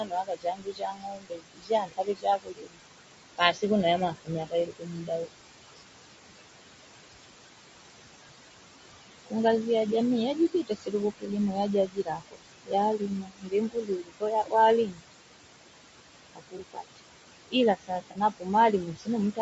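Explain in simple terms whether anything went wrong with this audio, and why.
Several things went wrong. Throughout, noise suppressor artifacts: the call's noise filter kept lowering the steady room hiss, so the background sinks between phrases and rises under them.

The whole recording also sounds rough and grainy, likely from low-delay AAC compression, the quick-response audio squeezing video calls use, which loses fine detail in the voice.

Speech cut by the noise suppressor happens from 0.0 to 2.8 s, 3.38 to 6.16 s, 10.52 to 15.03 s and 16.33 to 19.39 s. The filter mistook quiet parts of the speech for noise, so soft sounds and word endings come out swallowed or faint.

AAC frame loss with concealment occurs at 16.57 to 16.60 s and 18.11 to 18.17 s. Tiny pieces of audio never arrived, and the receiver guessed to fill the gaps, leaving brief smeared, noisy blips.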